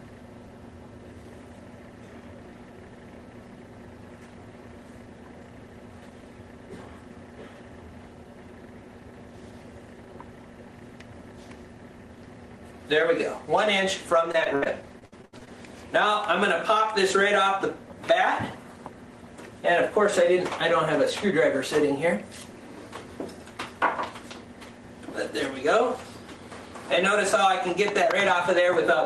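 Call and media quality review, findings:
Repeated packet loss (robotic sound), 14.31–15.49 s. Ten gaps, longest 70 ms, about 28% of the stretch concealed. Jitter buffer/PLC repeats last audio over each hole. Choppy, pieces missing. Opus path, band-limited near 12 kHz.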